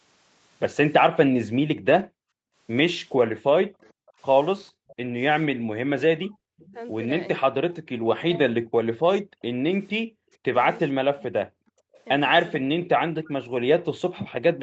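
From 1.49 to 2.55 s the background is gated by the echo canceller: room sound drops by up to about 40 dB for roughly a second while the loudspeaker plays.

Inside that stretch, 1.91 to 2.05 s is a lost packet rebuilt from error correction. About 80 ms, which fits four 20 ms frames, sounds rougher and noisier but has no gap. A second such patch at 4.55 to 4.57 s is 20 ms long.

From 3.32 to 13.65 s the speech dips deeply for about five seconds in total. This is likely speech suppressed in double talk, where the canceller ducks both sides at once.

At 3.81 to 4.95 s, 6.67 to 6.73 s and 11.93 to 12.01 s, a faint copy of the speech trails it by 0.45 s, far below the main level. This is likely echo leak from a loudspeaker the canceller did not fully cancel.

From 6.35 to 6.51 s, repeated packet loss gives a robotic sound: four 20 ms holes are patched, so half the span is concealed and sounds choppy. 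The call path's 8 kHz bandwidth is audible throughout as a dull top end.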